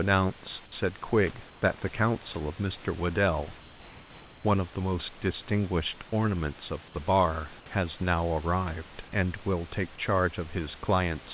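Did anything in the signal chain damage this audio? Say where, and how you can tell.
Yes. Call processing likely halted transmission from 1.5 to 1.62 s, so comfort noise in place of the background swaps the room's textured noise for a featureless hiss about 2 dB quieter.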